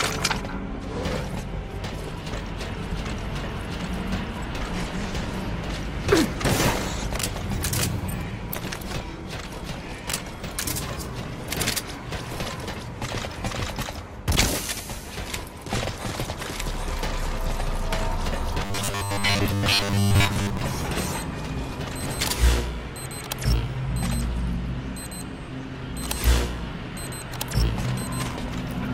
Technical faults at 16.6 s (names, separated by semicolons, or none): none